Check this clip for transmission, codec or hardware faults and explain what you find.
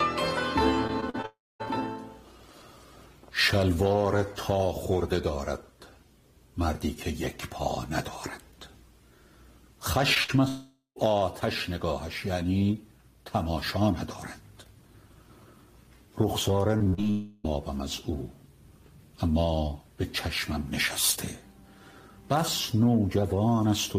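Yes, there are network transmission faults, in three clusters.

Repeated packet loss (robotic sound) at 0.87–1.26 s and 16.78–17.10 s: four, then seven, holes of up to about 40 ms, each patched by extending the last sound. The result is choppy and robotic, unlike the single smear of an isolated loss.

Long network dropouts at 1.26–1.61 s, 10.48–10.98 s and 17.10–17.46 s: the audio stops arriving, likely because the connection stalled. Concealment holds a fading buzz or hiss, which gives way to roughly 0.2 s and 0.1 s of silence in the first two. Unlike a burst, the missing stretch lasts over a third of a second.

Short concealed packet loss at 10.14–10.18 s: about 20 ms never reached the decoder in time, and the gap was filled from the preceding sound. It is heard as a brief smear.

Burst of packet loss at 10.24–10.30 s: about 40 ms of consecutive packets was lost. The sound is held and turned down, leaving a short fading buzz or hiss before playback resumes further on.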